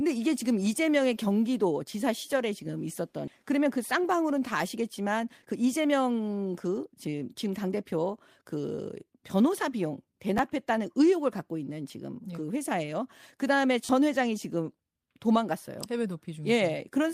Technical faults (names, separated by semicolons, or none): skip ahead; jitter buffer speed-up; repeated buffer